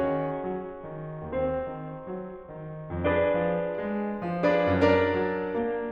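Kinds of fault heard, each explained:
Bluetooth SBC bit pool drop, 0.31 to 3.75 s and 5.58 s to the end: a congested link made the encoder shrink its bit budget, so the top sub-bands starve and the rest coarsen. The music turns dull and gritty, fitting a fall from bit pool 31 to 6.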